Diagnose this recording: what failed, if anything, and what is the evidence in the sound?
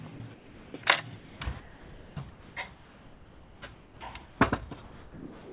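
Sound chopped by the voice detector, 0.16 to 0.86 s and 1.16 to 4.0 s, at the call-processing stage. The sound keeps breaking up, with about 460 ms and then 2.2 s given over to comfort noise, likely because the sender's detector kept toggling transmission.

Sound dropped by the voice detector, 4.26 to 4.4 s and from 4.82 s to the end, also in call processing. The sound gives way to steady noise or near silence, losing about 80 ms and then 590 ms, most likely because the detector misread quiet passages as background and stopped sending. Throughout, nothing is heard above 4 kHz, as the G.711 call path allows.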